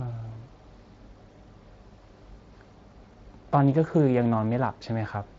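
No technical faults can be heard in this recording.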